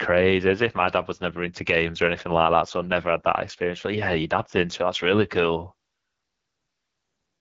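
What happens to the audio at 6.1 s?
At 6.1 s the speech carries the AMR wideband (HD Voice) codec damage that runs through the whole clip. The codec rebuilds the voice from a pulse-excited vocal tract model and fills the top band with shaped noise, and here the plainly rough, raspy texture points to one of its lowest rates, around 8.85 kbit/s. Unlike narrowband phone coding, which stops near 3.4 kHz, content extends to about 7.6 kHz, with the airy, noise-like upper band typical of AMR-WB.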